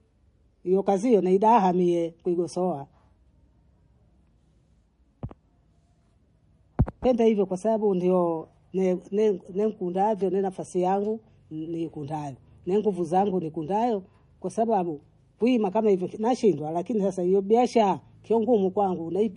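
MP3 compression damage runs throughout the speech: nothing is present above 10.5 kHz, and the codec damage is plainly audible from start to finish. The sound is watery and swirly, s sounds turn metallic and chirpy, and consonant attacks smear. The likely cause is an MP3 encoder short of bits, which fits a bitrate near 40 kbps. It cut the treble at a fixed point and dropped weak frequency lines that flicker on and off between frames.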